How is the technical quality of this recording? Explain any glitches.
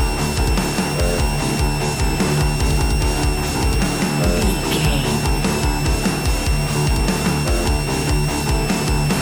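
The recording is compromised by one continuous fault. A switching supply whistle runs for the whole clip, a thin high tone wandering between about 2.65 and 2.76 kHz, sitting roughly 15 dB below the wanted sound. It comes from a nearby switching power supply whose regulation has dropped into an audible burst rate, or from two supplies beating against each other. Unlike mains hum, it sits well up in the treble rather than at low harmonics. Unlike a steady test tone or carrier, its pitch drifts instead of holding still.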